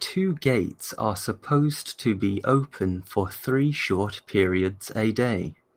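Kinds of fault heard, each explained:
No faults heard in this clip.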